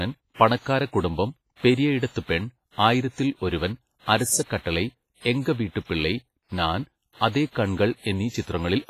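Heavy codec damage runs throughout the speech, likely WMA compression at around 24 kbps. Coarse quantisation smears noise into a washy, ringing hiss. Nothing sounds above 15.5 kHz.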